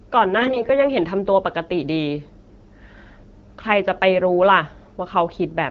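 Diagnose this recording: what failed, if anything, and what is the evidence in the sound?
AMR bit errors on the network link, 0.37 to 0.71 s: the speech keeps its pitch and level but turns hoarse and gargly. This fits roughly one bit in ten flipped in weakly protected excitation and gain data. A spectrogram shows smeared, noisy harmonics, while the waveform envelope stays intact.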